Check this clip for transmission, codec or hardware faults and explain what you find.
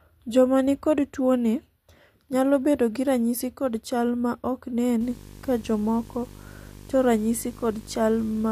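One hardware fault is present: video or display buzz, from 5.01 s to the end of the speech clip at 8.52 s. A screen or video cable is coupling into the audio path, adding a 50 Hz buzz at the picture's field rate with hash above it, plus a thin whistle at the 15.6 kHz line rate, sitting around 20 dB below the speech. On a spectrogram this appears as a harmonic comb stacked on 50 Hz and a steady line at 15.6 kHz, both starting at 5.01 s. The waveform shows a repeating 20 ms ripple beneath the speech.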